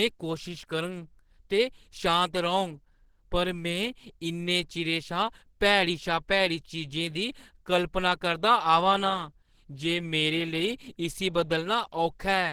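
Throughout the clip, the speech was likely squeezed through Opus compression at a very low rate, consistent with roughly 16 kbps. At that rate the encoder works in its hybrid mode, coding the lower band as speech and filling the upper bands loosely. The audio stays fullband, reaching about 20.2 kHz, but the damage is plainly audible: the voice sounds hoarse and muffled, and the upper range turns grainy and noisy.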